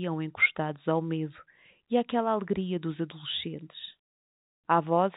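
Nothing is technically wrong in this speech recording, which carries the narrow band of G.711 mu-law telephone coding, with no content above 4 kHz and at most a faint quantisation noise that follows the level of the signal.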